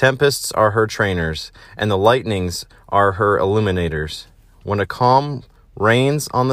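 Nothing stood out as a technical fault on listening to the speech recording.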